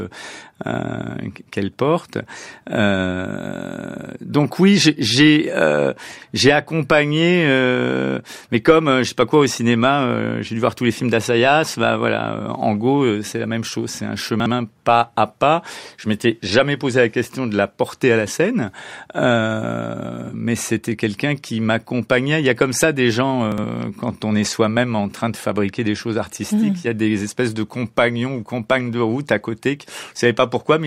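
At 14.4 s and again at 23.52 s, just before "pas à pas" and "quand on est", chunks play out of order. In each case a 60 ms chunk is played one chunk late, so nothing is lost but the sequence is jumbled, with three hard joins.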